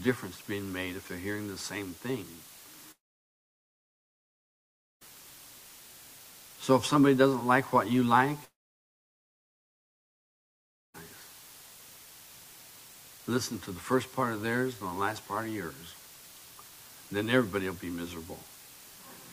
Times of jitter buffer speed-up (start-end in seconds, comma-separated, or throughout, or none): none